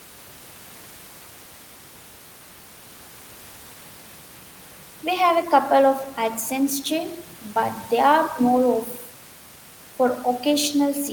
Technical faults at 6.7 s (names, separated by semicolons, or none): none